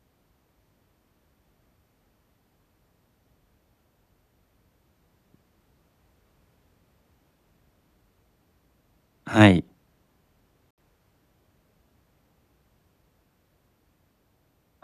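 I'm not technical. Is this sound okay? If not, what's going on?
No. At 10.71 s the speech drops out completely and comes back at 10.78 s, a gap of about 72 ms. This is a digital broadcast dropout: the receiver briefly lost the signal or got damaged data, muted itself, and resumed once good data arrived, which fits about three lost frames. Unlike a crackle or a bad cable, there is no noise or distortion, only a clean silent hole, and the speech that fell in that gap is gone.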